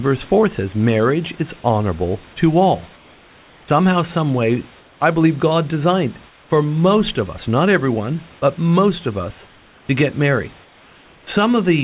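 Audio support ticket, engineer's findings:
Comfort noise in place of the background, likely from discontinuous transmission on the sending side: voice detector gating pauses, receiver substituting synthetic noise. Heard at 2.96–3.68 s, 4.79–5.0 s (between "some way" and "I believe"), 6.29–6.5 s, 9.47–9.89 s ("but most of us" to "get married"), 10.64–11.27 s (after "get married"). Real room background, about 32 dB under loud speech, swapped for steady featureless hiss, about 3 dB quieter. Band stops at 4 kHz, consistent with G.711 A-law.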